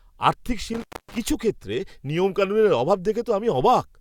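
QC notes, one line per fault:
0.74 to 1.18 s, intermittent contact: the speech cuts out for about 266 ms within this span, with crackle on either side of the gap as a loose plug or cable makes and breaks contact. The break is ragged rather than clean, so it sounds unlike a codec dropout or deliberate mute. Those fall silent abruptly and return without the scratchy rough edges that a physically unstable connection produces.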